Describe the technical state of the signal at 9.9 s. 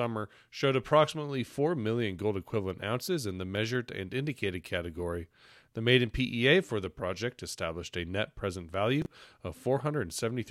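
At 9.9 s the speech signal is intact, with no audible fault at that moment.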